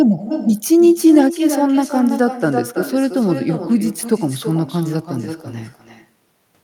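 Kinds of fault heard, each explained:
Echo with no canceller: the speech returns as a distinct, quieter copy, about 9 dB down, roughly a third of a second behind, thinner, throughout the clip; unlike room reverberation, it repeats as a separate delayed copy rather than blurring into a decaying tail.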